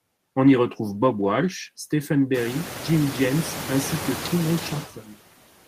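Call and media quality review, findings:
Noise suppressor artifacts, whole clip: per-band gain pulls steady background down about 18 dB between phrases; noise rises back under the words.

Speech cut by the noise suppressor, 4.9–5.2 s: suppressor misclassifies speech energy as noise, attenuating it up to about 19 dB; sounds swallowed and faint.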